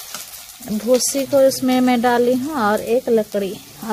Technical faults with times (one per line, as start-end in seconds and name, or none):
none